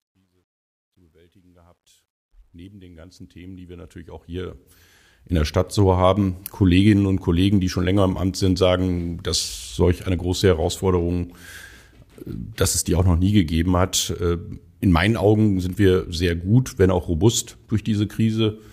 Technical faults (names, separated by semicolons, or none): truncation distortion on a fade